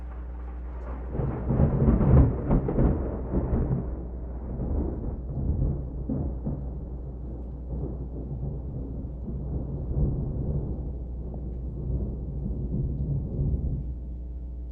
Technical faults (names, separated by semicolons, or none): mains hum; DAB burbling